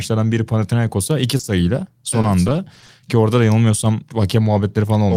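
At 1.37 to 1.41 s there is a short concealed packet loss: about 20 ms of speech never arrived in time, so the decoder extrapolated the preceding sound to cover the hole and blended back into real audio. It comes across as a brief smear, with that slice of speech gone.

Immediately afterwards, from 1.41 to 1.45 s, a short stall from a late packet follows. The jitter buffer ran dry as delay rose by about 20 ms, so the receiver held the last sound for 20 ms and resumed where it left off. Nothing is lost, but the sound drags briefly.

From 2.21 to 2.90 s, repeated packet loss produces a robotic sound. Several short holes, none longer than 20 ms, are patched one after another. In total about 80 ms is synthesised, roughly 12% of the stretch, and 60 ms of real speech is missing, leaving it choppy.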